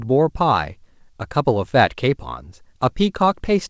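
No technical faults can be heard in this speech. It has come through a working WebRTC call path, and with nothing above 8 kHz the sound fits a wideband codec such as G.722 at 64 kbps.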